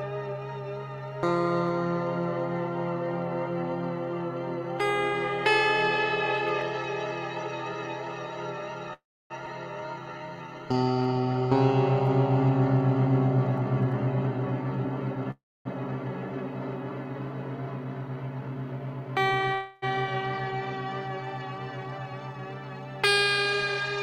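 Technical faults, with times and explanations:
8.93–9.32 s, 15.31–15.67 s, 19.54–19.84 s, call audio freeze: the sound fades out and then resumes where it stopped, with nothing missing. About 290 ms and 260 ms of silence fill the first two gaps, and the third carries no silence. This was likely a jitter buffer run dry by held-up packets.
9.46–9.48 s, skip ahead: roughly 200 ms of audio vanishes and the two sides join almost directly, with no fade-out or pause, unlike the freezes.
9.81–11.26 s, jitter buffer slow-down: the sound plays at 86% speed without any drop in pitch, drawn out by 213 ms of repeated short periods.
13.61–15.16 s, 17.57–19.54 s, 21.84–22.36 s, jitter buffer speed-up: pieces are cut to shed a backlog, so the pitch holds while the pace rises. At 102% about 50 ms is removed with little to notice. The two later stretches run at 110% and sound hurried, losing about 200 ms and 50 ms.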